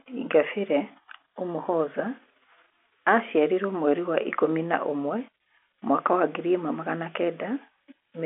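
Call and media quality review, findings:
Nothing stood out on listening to this speech, which comes through the expected G.711 telephone band with no audible problem to log.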